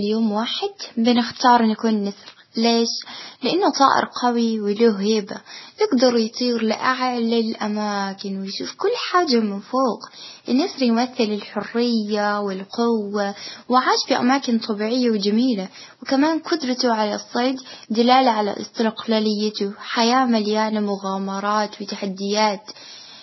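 Throughout the speech, nothing reaches above 5.8 kHz, and two different sets of compression artefacts are heard layered together. The likely cause is transcoding between lossy codecs: a low-rate MP3 encode re-encoded at a similarly low rate with Vorbis, which keeps the lowest cut-off in the chain.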